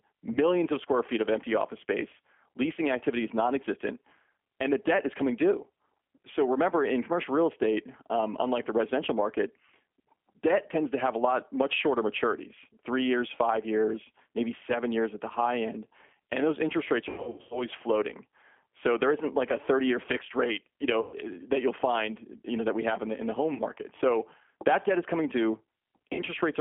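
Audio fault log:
Throughout, G.729 codec: the speech is band-limited to about 200 Hz to 3.4 kHz and rebuilt at 8 kbit/s from a vocal tract filter, a pitch predictor and a few pulses per frame, which gives a plainly audible rough, synthetic texture. Unlike dropouts, this is steady and present in every stretch.
0.32–0.39, 17.09–17.66, 21.01–21.16, 23.54–23.61, 26.13–26.22 s, VoIP packet loss concealed by the speech codec: 30, 330, 120, 30 and 60 ms of audio were lost. The decoder stretches the last pitch and filter into a fading buzzy tone or coloured noise rather than silence. Because each frame builds on the one before, the sound stays weak or distorted briefly after packets return. At 17.09 s the losses are scattered over 420 ms, with the longest run 90 ms long.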